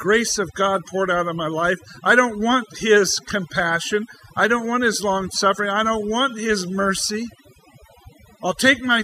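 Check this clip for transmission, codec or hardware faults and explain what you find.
The clip has one fault, overdone noise removal, and it runs through the whole speech recording. A noise reduction stage set far too aggressively drives individual frequency bands down or out whenever their level sits close to its noise estimate, so low-level parts of the speech are removed along with the noise. The background drops and breaks up into twinkling, chirpy specks.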